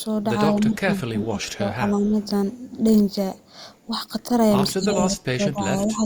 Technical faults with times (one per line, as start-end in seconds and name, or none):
0.00-0.04 echo leak
0.50-2.17 speech suppressed in double talk
4.72-6.05 speech suppressed in double talk